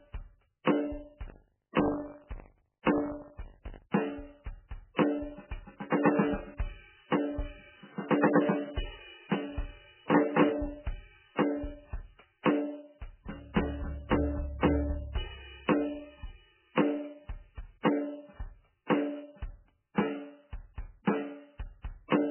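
Throughout the music, nothing is heard above 3.1 kHz, and the sound is heavily watery and swirly, pointing to likely MP3 compression at a very low bitrate, near 8 kbps. Weak frequency lines flicker between frames. A plain low-pass filter would dull the treble without this swirl.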